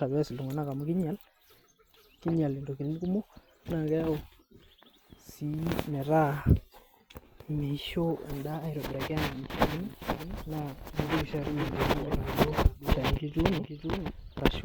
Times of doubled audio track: 9.50-14.64

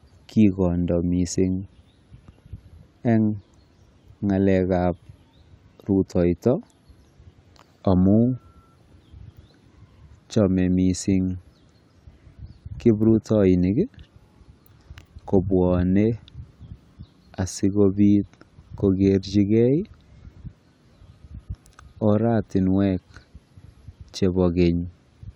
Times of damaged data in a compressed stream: none

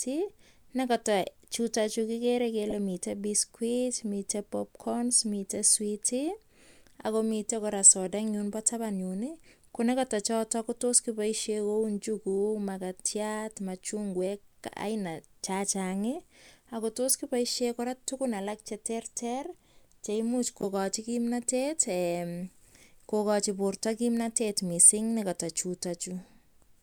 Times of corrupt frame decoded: 2.70-2.72, 17.08-17.14, 20.61-20.64

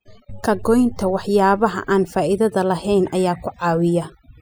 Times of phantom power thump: none

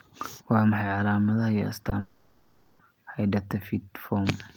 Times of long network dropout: 1.99-2.81

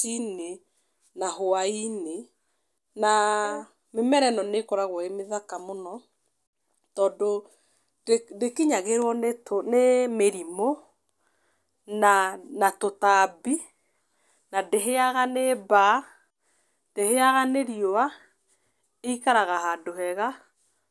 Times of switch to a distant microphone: none

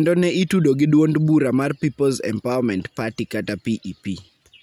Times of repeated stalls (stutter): none

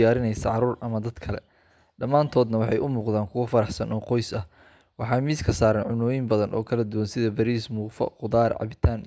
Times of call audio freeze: none

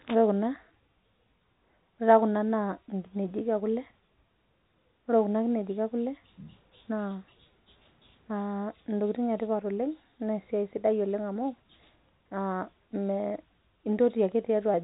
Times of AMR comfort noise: none

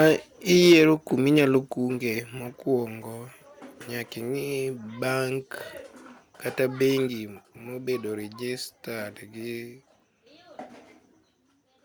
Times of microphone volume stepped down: 0.73, 1.74, 7.08

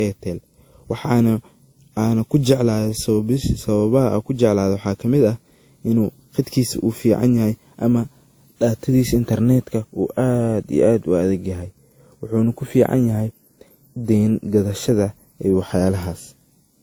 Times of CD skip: none

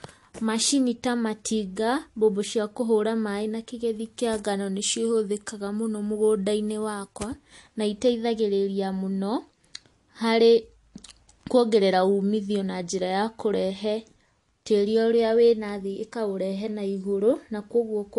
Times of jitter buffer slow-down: none

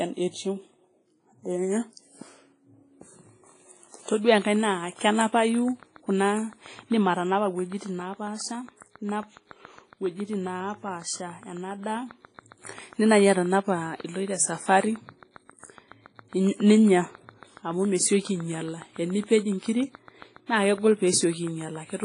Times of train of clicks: 4.42-22.04

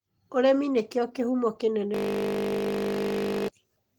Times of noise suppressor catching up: none

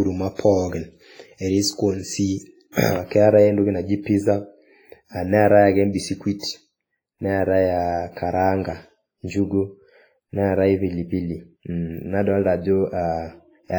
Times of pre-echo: 2.72-2.76, 6.39-6.43

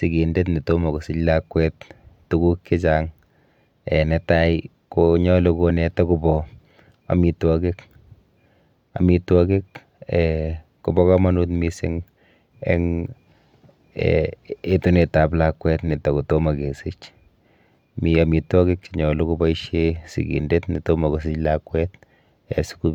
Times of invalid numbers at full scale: none

